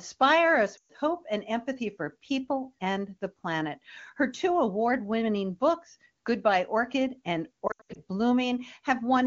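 Lost AMR speech frames hit this wideband (HD Voice) speech clip at 0.77 to 0.91 s and again at 7.67 to 8.02 s. When frames fail their checksum, the AMR-WB decoder repeats the last good pitch and vocal tract settings at falling gain. The first gap, about 120 ms, drops the sound to near silence within two frames. The second is broken into short dips, none longer than 80 ms. Elsewhere the codec sounds clean, as expected at its top rate.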